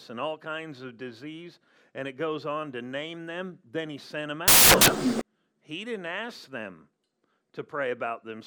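At about 4.48 s, right after "he sent them", the speech gives way to loud, harsh broadband noise until about 5.21 s. That's samples built from the wrong bytes: for roughly three quarters of a second the reader assembles each sample from mismatched bytes, so the quick-flickering low bits end up as the big part of every value. The result is harsh noise in place of the speech for the whole stretch.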